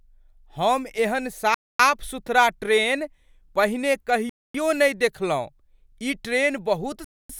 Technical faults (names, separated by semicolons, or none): gap between chunks